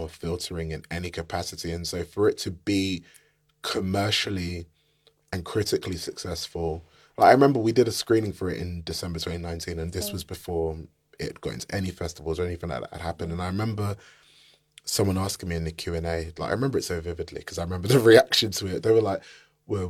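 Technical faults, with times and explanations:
Nothing here to flag: the speech runs along without any technical faults turning up at any point.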